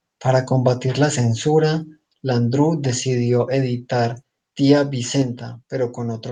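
Microphone volume stepped down at 5.22 s: the speech suddenly drops by about 4 dB, likely because the call software lowered the device's input level in a single step.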